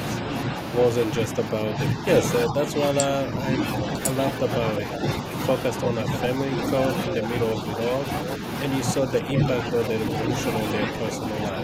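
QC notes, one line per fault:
1.31–3.87 s and 9.02–10.89 s, speech suppressed in double talk: the speech dips by around 5 dB in patches, roughly one and a half seconds in the first span and half a second in the second. This is likely an echo canceller mistaking this side's talk, overlapping the far end's sound, for echo. The waveform shows a sagging envelope, and the spectrogram shows faded energy.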